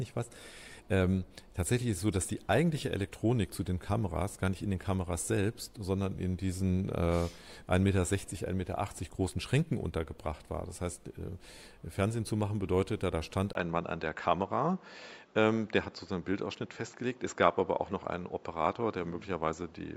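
At 13.53 s the audio turns duller and narrower through to the end, with nothing above 7.6 kHz, a 20 ms gap at the change, a faint new noise floor and little level shift. The likely cause is an input switched to a poorer device.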